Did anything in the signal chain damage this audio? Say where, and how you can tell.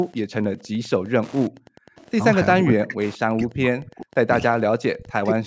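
Yes. Wi-Fi interference runs through the whole clip and enters at the analogue wiring. A steady tick repeats every 102.4 ms, about ten times a second, at roughly 30 dB below the speech. That spacing is the beacon interval of a nearby Wi-Fi radio. Its bursts couple into the audio circuit and get rectified into audible clicks before the signal is digitised, so the ticking sits under everything regardless of level.

Background gated by the echo canceller, from 1.5 to 1.95 s, is a call-processing fault. The room sound drops by about 40 dB for roughly half a second, then snaps back. The echo canceller decided the loudspeaker was active and clamped the microphone path hard. It released once it judged the far end quiet, leaving a hole in the ambience rather than a gradual fade.

An echo leak follows at 1.96 to 2.1 s: a brief, faint copy of speech returns 470 ms late, roughly 30 dB under the direct voice. 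The likely cause is a far-end loudspeaker whose echo canceller failed to subtract all of what its microphone picked up. The residue was sent back down the call, arriving as a short scrap.

Speech suppressed in double talk appears from 2.61 to 4.3 s and again from 4.9 to 5.46 s. Across roughly one and a half seconds, and then about half a second, the voice dips by around 40 dB. The likely cause is both sides talking at once, so the canceller could not separate local speech from loudspeaker echo and attenuated everything. The call's band limit, with nothing above 8 kHz, is ordinary microphone processing, not part of this damage.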